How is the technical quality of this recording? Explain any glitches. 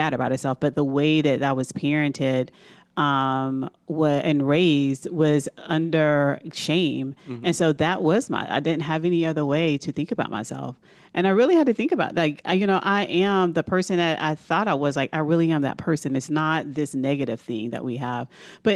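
No glitches or technical faults can be heard here.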